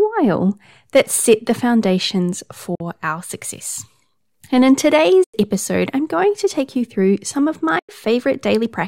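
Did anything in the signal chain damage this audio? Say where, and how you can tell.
Yes. The speech cuts to silence at 2.75–2.81 s, 5.24–5.34 s and 7.79–7.89 s, gaps of 46 ms and 93 ms, then resumes further on. This is likely a Bluetooth dropout at playback: late packets were discarded, and the gaps fit two and four lost packets.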